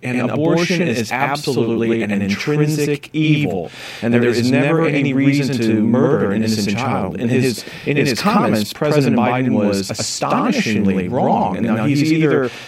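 Channel delay (doubling) runs through the whole clip. One channel of this speech arrives about 93 ms behind the other, a lag that fits a 4096-sample buffer, and the two are then summed to mono. At that spacing the late copy does not fuse with the original. Every syllable is followed by a second one at the same level, so the speech sounds doubled, with a distinct slap echo trailing each word.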